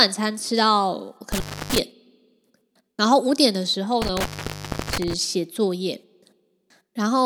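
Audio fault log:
1.32–1.78 s and 4.02–5.13 s, intermittent contact: the speech drops out twice with a burst of crackle at each edge, leaving only a faint hiss in the gaps, which are about 0.29 s and 0.67 s long. This is a loose plug or cable briefly losing its connection. As the contact scrapes open and closed it produces the crackle, and while the circuit is broken no signal passes, so only the line's own low noise remains.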